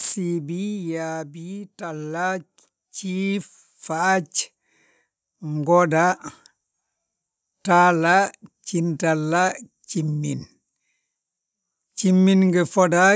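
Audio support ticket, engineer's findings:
Automatic gain falling, 0.05 to 1.56 s: speech starts loud, then level sinks about 8 dB over roughly 1.5 s, background dropping with it. Probable component: AGC in the call microphone chain, judging input too hot and pulling gain down gradually.

Automatic gain rising, 1.62 to 4.37 s: speech and background swell together by about 8 dB across nearly 3 s. Same AGC stage, now reading input as too quiet and ramping gain back up. Band limit at 8 kHz, as expected from call processing.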